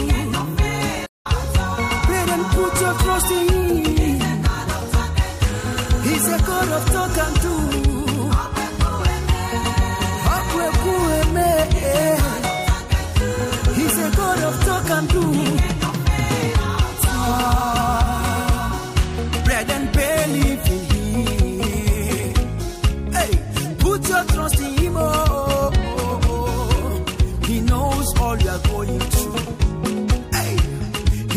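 At 1.06 s the sound cuts to silence for about 0.19 s, then resumes: a playback stall, likely the player running short of data.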